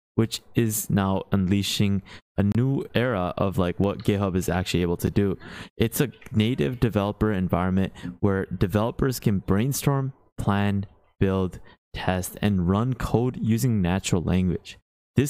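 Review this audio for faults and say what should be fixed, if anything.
There's a gap at a join of encoded pieces: a silence of about 29 ms from 2.52 to 2.55 s and a shorter one, about 8 ms, at 5.07 s. The encoder's start-up silence and end padding were left in where pieces were joined.

At 2.82 and 3.84 s there are single sharp clicks, likely dropped samples. A fraction of a millisecond goes missing, so the waveform jumps.

To prevent these, trim encoder delay and padding before joining pieces, and make sure the capture or playback chain never loses samples under load.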